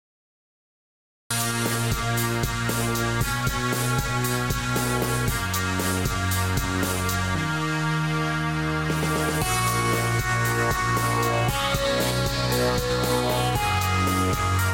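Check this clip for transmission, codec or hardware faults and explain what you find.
One fault stands out, a cut-off start. The clip opens with digital silence until 1.31 s. Then sound appears abruptly, already mid-event. Capture or streaming began late, so the true onset was missed. There is no natural attack and no fade-in.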